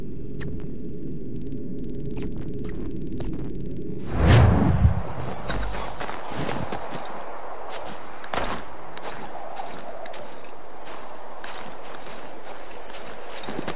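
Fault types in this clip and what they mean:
Nothing here stands out as a technical fault, so there's nothing to list for this clip.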